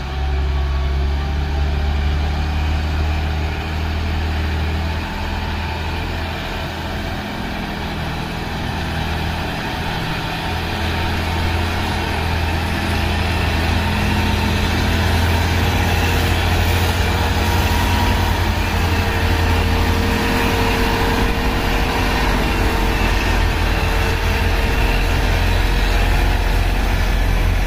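No technical faults can be heard in this clip.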